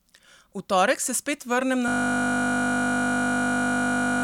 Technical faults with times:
1.88-4.24 system hang loop

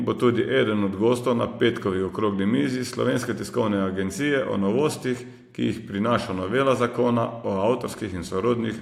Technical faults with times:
none

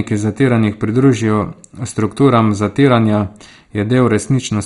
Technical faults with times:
0.00-4.66 MP2 compression

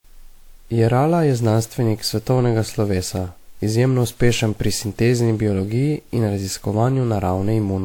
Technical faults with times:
0.00-7.84 generation loss

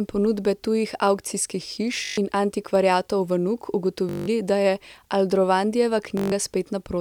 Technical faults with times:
2.05-2.18 Bluetooth stutter
2.75-3.09 CD scratch ticks
4.09-4.28 Bluetooth stutter
6.17-6.32 Bluetooth stutter

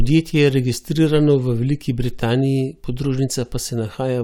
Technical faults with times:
none

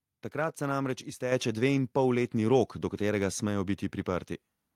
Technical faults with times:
1.32 microphone volume stepped up
2.34 microphone volume stepped up

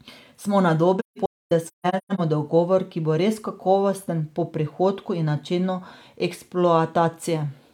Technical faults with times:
0.99-2.20 AAC frame loss with muting

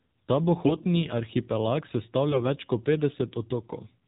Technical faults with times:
0.00-4.07 AMR narrowband mobile codec
0.66-0.87 AMR bit errors
2.32-2.44 AMR bit errors

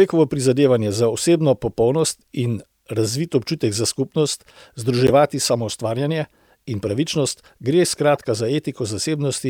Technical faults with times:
5.07-5.10 corrupt frame decoded
8.15-8.20 corrupt frame decoded

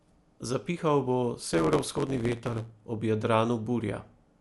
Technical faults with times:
0.00-4.40 Dolby Digital compression
1.40-2.73 block size mismatch (truncated)

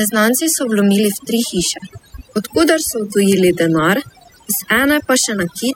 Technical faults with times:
0.00-5.75 overdone noise removal

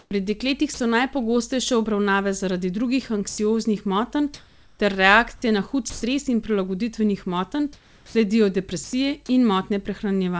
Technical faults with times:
0.00-0.11 comfort noise in place of the background
0.74-0.80 sound dropped by the voice detector
3.29-3.38 sound dropped by the voice detector
4.34-4.79 comfort noise in place of the background
5.90-6.02 sound dropped by the voice detector
7.73-8.15 comfort noise in place of the background
8.84-8.93 sound dropped by the voice detector

